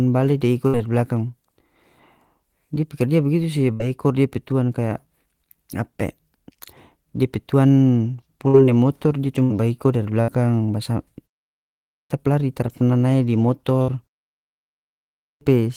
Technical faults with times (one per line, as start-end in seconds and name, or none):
0.67-0.76 burst of packet loss
3.73-3.83 burst of packet loss
8.48-8.56 burst of packet loss
9.43-9.53 burst of packet loss
10.22-10.31 burst of packet loss
11.84-12.10 clipped start after a pause
13.82-13.91 burst of packet loss
15.14-15.41 clipped start after a pause